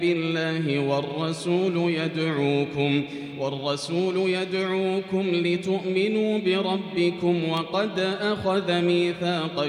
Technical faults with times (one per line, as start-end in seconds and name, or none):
7.57 electrical switching spike